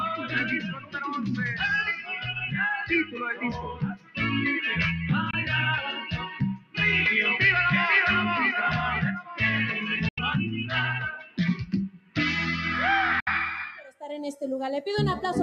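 A noise suppressor applied to music or sounds stays engaged throughout. It treats sustained, steady content as noise and pulls it down, so levels swing by roughly 10 dB and held material keeps sinking and recovering, giving a pumping, thinned-out result.

The sound cut by the noise suppressor comes at 0.17–1.34 s (about 15 dB down), 1.96–2.48 s (about 7 dB), 3.04–4.19 s (about 16 dB), 6.0–6.78 s (about 16 dB), 9.21–9.36 s (about 13 dB), 11.15–12.17 s (about 17 dB) and 13.78–14.02 s (about 14 dB). Each time, steady or decaying material is attenuated more than its surroundings, so tails collapse early while sharper onsets survive.

Three silences, at 5.31–5.35 s, 10.08–10.19 s and 13.20–13.28 s, blank out about 21 ms, 85 ms and 64 ms of sound. They are likely Bluetooth dropouts, where late packets were discarded. Playback resumes further along, as though the audio had kept running through each gap.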